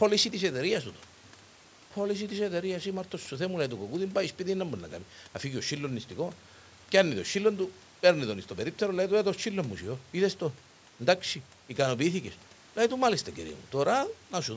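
No technical faults can be heard in this speech recording. The call's microphone processing leaves nothing above 8 kHz, and the room's background noise sits about 30 dB below the speech.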